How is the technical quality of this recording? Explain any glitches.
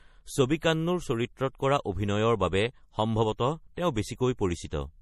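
Watery throughout, with plainly audible damage from start to finish. The top end stops dead at 15 kHz, and the quieter detail seems to flicker in and out, giving a swirly texture, with metallic chirps on s sounds and consonant attacks smeared. This is likely MP3 compression at a starved bitrate, consistent with roughly 40 kbps: the encoder discards everything above the cut-off and zeroes weak frequency lines that then switch on and off between frames.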